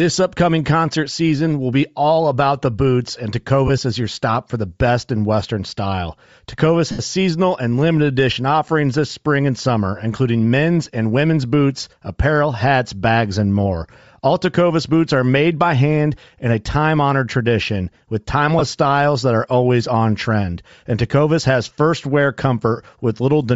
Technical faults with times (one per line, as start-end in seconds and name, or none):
0.00-23.55 Bluetooth LC3 compression
3.67-3.70 lost LE Audio frames
6.91-7.00 lost LE Audio frames
10.85 lost LE Audio frames
18.59-18.61 lost LE Audio frames